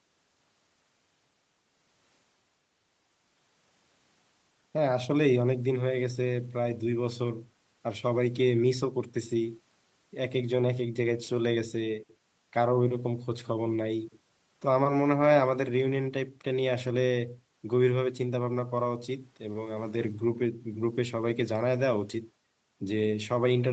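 No faults: the speech has passed through a call's microphone processing, whose high-pass filter trims the lowest bass and which leaves nothing above 8 kHz, as that path normally does.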